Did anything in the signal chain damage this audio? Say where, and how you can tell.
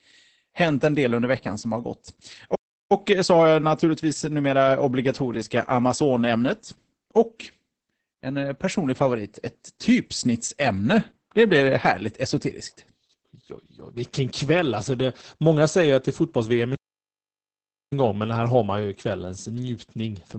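Yes. Heavy Opus voice compression at the codec stage: nothing above 8.7 kHz, and the speech sounds muffled and hoarse, which points to low-bitrate SILK coding near 10 kbps.

Two playback stalls: the sound drops to silence from 2.55 to 2.92 s and from 16.75 to 17.93 s, then resumes, likely from the player's buffer running dry.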